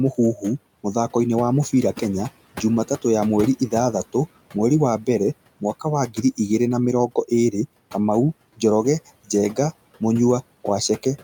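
A speech recording with noise suppressor artifacts throughout. The room noise sits about 20 dB below the speech. The suppressor pulls it down by about 17 dB in the gaps, then lets it back up under the talking. There is also speech cut by the noise suppressor. From 4.99 to 5.08 s, between "mweri wa" and "mwaka wa", a sound is lowered by about 13 dB. From 6.07 to 6.39 s, just after "mwaka wa", another is lowered by about 10 dB. The suppressor took these soft parts for noise, so they come out swallowed and faint.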